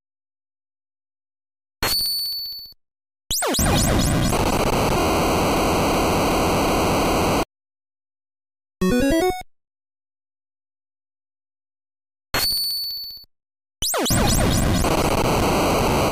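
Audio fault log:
5.57–7.43 s system hang loop: one 0.37 s piece repeats five times, at 2.69 Hz. The system froze while the hardware replayed its buffer, losing roughly two seconds.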